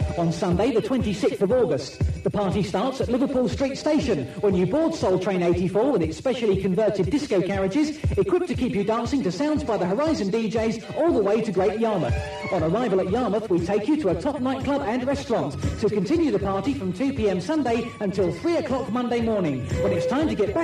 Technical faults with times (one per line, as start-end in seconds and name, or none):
none